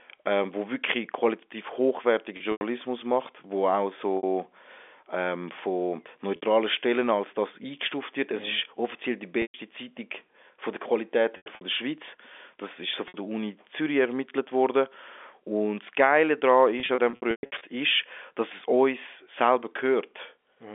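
Packet loss with pitch repetition recurs at 2.37–2.61, 4.17–4.23, 6.36–6.42, 9.42–9.54, 11.37–11.61, 13.08–13.14 and 16.8–17.61 s. Losses of 60 to 150 ms are bridged by repeating the last pitch period, which gives a held, buzzy sound. The final stretch scatters 390 ms of gaps over 810 ms. Its longest run is 120 ms, so the fill fades toward silence before the speech cross-fades back, all within the narrow telephone band.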